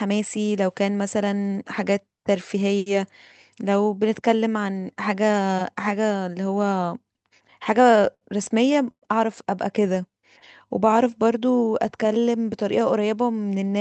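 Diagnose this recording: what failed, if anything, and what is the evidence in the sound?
Repeated stalls (stutter), 7.19 to 8.24 s: eleven short gaps, longest 70 ms, fill about 17% of that span. Late network packets kept emptying the jitter buffer, and the receiver stretched the last sound each time.

Call audio freeze, 8.91 to 9.05 s: the sound holds and fades, then goes silent for 70 ms before resuming. The likely cause is delayed packets emptying the jitter buffer, adding a 109 ms delay.

Jitter buffer slow-down, 9.79 to 10.21 s at 91% speed and 10.69 to 12.22 s at 89%: the speech drags at unchanged pitch as the receiver repeats pitch periods to refill its buffer.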